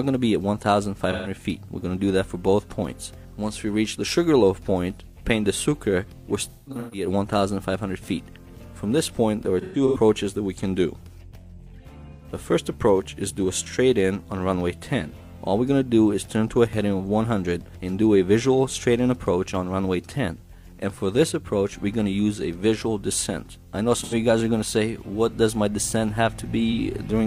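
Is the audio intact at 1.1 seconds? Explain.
No. AAC frame loss with concealment affects 1.12 to 1.31 s. About 128 ms of coded audio, which fits three lost frames, was rebuilt from the last good spectrum, giving a smeared, noisy or phasey patch. A spectrogram shows blurred, repeated spectral texture; the waveform loses its normal shape.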